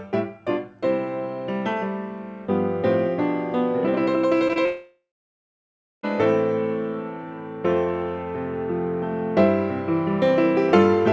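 Two brief smears come first, at 4.48 to 4.51 s and again at 4.53 to 4.57 s. Each is a short wobble where the sound stretches oddly for a moment and then snaps back. These are short concealed packet losses. Roughly 20 ms of the call arrived too late each time, and the receiver covered the gap by extending the preceding sound before blending back into the real signal. Almost immediately after, at 4.65 s, the audio turns into a fading buzz or hiss that sinks to near silence for about a second. It resumes at 6.05 s with about 1.4 s of material simply gone. This is a long network dropout, most likely caused by a stretch where no packets reached the receiver. Concealment could only sustain the last sound briefly before giving way to quiet. Throughout, the audio carries nothing above 8 kHz, which fits a wideband call codec such as G.722.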